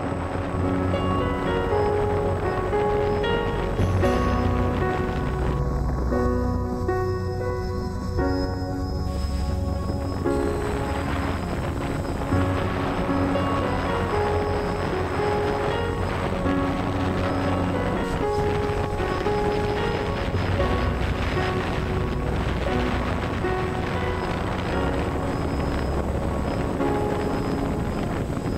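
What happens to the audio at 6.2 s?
One channel runs a fraction of a millisecond behind the other, and when the pair is folded to mono the shared content partly cancels itself: channel delay (comb filtering). From 5.59 s to 9.07 s, taking in 6.2 s, the audio turns hollow and phasey, with a fixed notch first appearing around 3 kHz and further notches repeating at even spacing above it, dulling the upper range.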